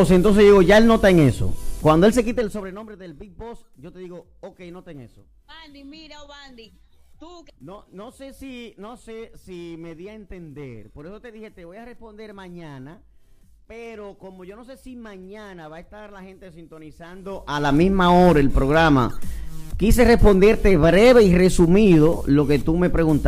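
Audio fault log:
2.14–2.88 s, zipper noise: a gain reduction of roughly 25 dB is applied in unsmoothed 1 dB steps, around forty a second, so the level drops as a staircase. Each jump puts a small discontinuity into the waveform, which comes through as a faint click. Strung together over those three-quarters of a second, the clicks form a rapid ticking, zipping texture that rides on the sound as it fades down.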